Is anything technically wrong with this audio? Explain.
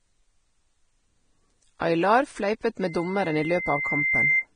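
Yes, there are two faults. Throughout the speech, the treble has been starved of bits, most likely by Vorbis compression at a low setting, around 20 kbps. With so few bits, the encoder discards everything above 9.7 kHz and quantises the remaining upper spectrum so coarsely that its fine detail turns into noise. The speech sounds dull at the top yet hissy and grainy, with roughened tones and smeared consonant attacks.

From 2.81 s to 4.46 s, a loudspeaker feedback squeal takes over. The microphone was picking up the loudspeaker it fed, and at 2.1 kHz the loop gain rose above one. That frequency reinforced itself on every pass, swelling over about one and a half seconds into a steady whistle. It sits roughly 5 dB above the speech until it ends.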